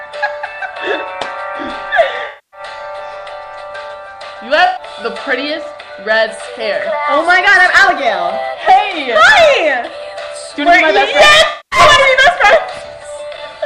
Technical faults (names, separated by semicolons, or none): AAC frame loss with concealment